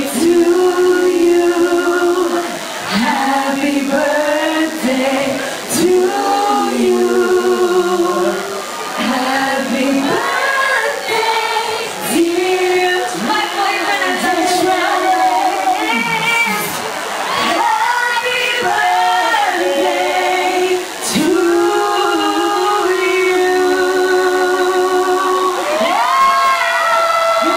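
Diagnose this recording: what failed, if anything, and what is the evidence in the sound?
The fault is DECT cordless phone buzz, entering in the analogue stage. A steady, thin 100 Hz buzz rich in harmonics runs through the whole recording, around 15 dB below the wanted sound. A nearby DECT handset or base transmits a short radio burst every 10 ms, and the audio circuit rectifies it into the audio path. On a spectrogram this shows as evenly spaced horizontal lines at 100 Hz and its multiples, plus fine vertical striations 10 ms apart. On the waveform it is a repeating pulse train at that period.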